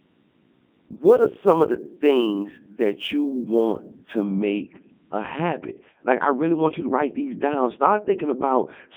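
From start to finish the speech sounds robotic and buzzy, with a synthetic, metallic edge and no air above about 3.6 kHz. The line sits roughly between 150 Hz and 3.5 kHz. This is the Codec 2 vocoder, heavily damaging the signal. It keeps only pitch, voicing, energy and a rough spectral shape, then rebuilds the voice from sine waves, so the real waveform is lost. The result fits its top 3.2 kbit/s mode.

From 0.00 s to 4.24 s, ending just before "make a habit", a fine hiss and grittiness ride on top of the louder and brighter moments and drop away in the pauses. This is sample clock jitter. The converter's clock wanders by a few microseconds, so samples land slightly early or late. Steep parts of the waveform suffer most, and the error sits about 40 dB below the signal.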